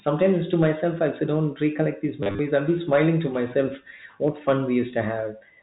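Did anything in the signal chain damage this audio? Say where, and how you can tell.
Yes. Hard clipping from an overdriven gain or converter stage flattens peaks from 0.08 to 1.04 s and 2.55 to 3.09 s. About 4 dB over, it adds crackle on peaks.

Packet loss with last packet repeated hits the network path between 2.23 and 2.39 s. Replayed fragments, the longest run lasting 30 ms, stutter robotically.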